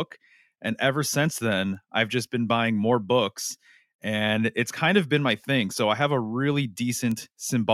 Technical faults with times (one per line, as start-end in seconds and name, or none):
1.75 bit error spike
7.11 bit error spike